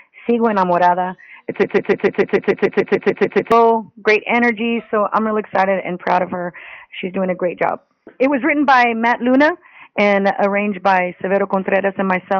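A stall in the player, encoder or stream likely left it resending its last buffered fragment: from 1.64 to 3.52 s a broken-record loop repeats one 147 ms piece exactly, 13 times back to back, and the audio meant for that stretch never plays.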